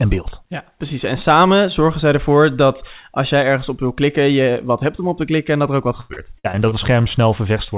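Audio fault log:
6.00–6.73 s: repeated packet loss (robotic sound). Six short holes follow close together. The longest lasts about 93 ms. Each hole is patched by stretching the sound just before it, so the same fragment repeats. About a third of this span is patched over like this, and the real audio there is gone. Around it, the call path's G.711 coding holds everything below 4 kHz.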